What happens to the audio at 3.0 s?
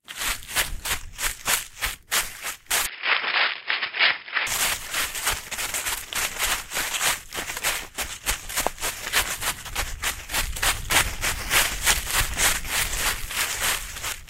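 Around 3.0 s the sound goes dull and boxy, with nothing above 5.2 kHz and a faint new noise floor well under the signal, from 2.86 to 4.47 s. That's likely an input switched to a poorer device, with no gap and roughly no level jump.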